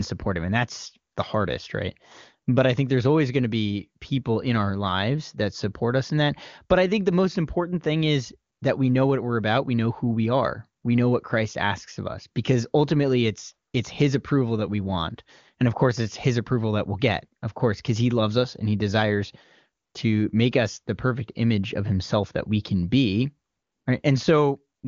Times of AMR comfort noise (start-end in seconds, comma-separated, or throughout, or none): 1.13, 8.53-8.61, 10.81, 13.71, 19.83-19.93, 23.49-23.85, 24.77-24.83